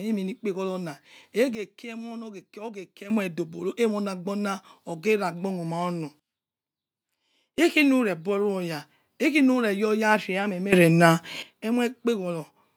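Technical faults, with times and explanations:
1.55–3.1 s, 6.2–7.58 s and 10.73–11.43 s, sudden gain jump: the speech and its background noise snap together to about -12 dB, then about -20 dB, then about +12 dB, and snap back at each end. That's likely a gain setting applied instantly with no ramp.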